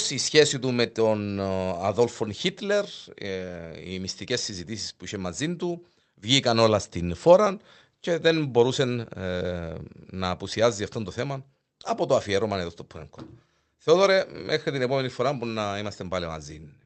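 Clock drift between sender and receiver runs through the whole speech clip: the sending side's clock is about 5 percent fast. Samples arrive slightly quicker than the receiver plays them, so its jitter buffer keeps filling, pushing the receiver to shed material to avoid falling behind.

Repeated timing corrections follow from that, from 0.30 s to 16.78 s. The receiver keeps trimming short slices to stay in step, always in the same direction and at uneven spacing. The speech is heard through a call codec band-limited to about 8 kHz.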